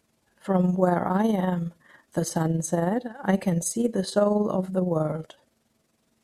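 The whole speech clip has overlap-add ripple: mismatched frame overlaps make the level dip about 6 dB around twenty times a second, giving a rough flutter.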